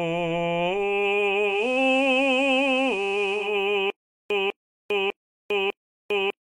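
A music clip with two faults. From 1.45 s to 3.56 s, digital radio blending to analogue is heard. The receiver cross-fades over 240 ms to the FM broadcast. Hiss rises, roughly 25 dB below the music, and the level drops by about 1 dB. From 3.90 s to the end, there is stutter with silent gaps. A 199.5 ms fragment repeats four times, each followed by 400.79 ms of digital silence, every 600.29 ms. The missing audio is lost. The likely cause is a stalled stream replaying its last fragment at each retry.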